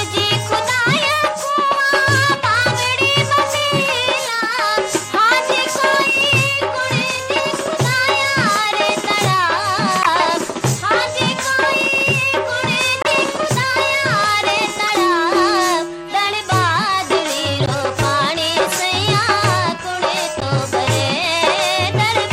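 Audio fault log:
4.29–4.33, 7.36–7.41, 10.03–10.08, 13.02–13.11, 14.87–14.89, 17.58–17.73 and 20.40–20.45 s: corrupt frame decoded. Damaged bits reached the decoder and were played, so misread gains and codes put energy at the wrong frequencies for each bad stretch. Each is a short chirp or noisy blip lasting about two or three codec frames, and the 17.6 s burst runs longer. The loudest, near 10.0 and 13.0 s, are the strongest errors, and the others are somewhat quieter. Lost-packet concealment leaves a gap or a smeared repeat, but these bursts add sound that doesn't belong.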